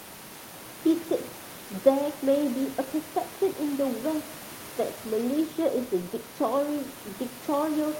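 No technical faults are audible.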